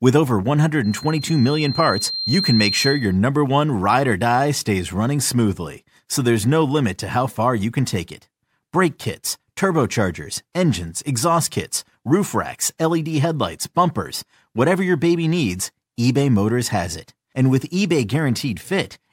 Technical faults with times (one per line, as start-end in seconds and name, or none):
0.84-3.18 loudspeaker feedback squeal